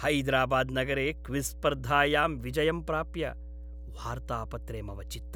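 Mains hum runs through the whole recording, from the first moment to the last. Power-line current has leaked into the signal path, most plausibly through a ground loop between connected devices or from a transformer sitting close to a cable or microphone. It sounds like a constant low drone at 60 Hz, with some low harmonics above it. The hum sits only around 10 dB below the speech, so it stays plainly audible beneath every phrase and fills each pause.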